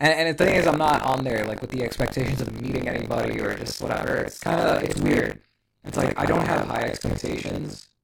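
From 0.38 s on, a robotic 50 Hz rattle: buffer tearing, each buffer about a third filled with stale audio some 70 ms old.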